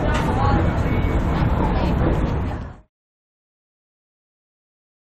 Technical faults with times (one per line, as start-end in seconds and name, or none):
none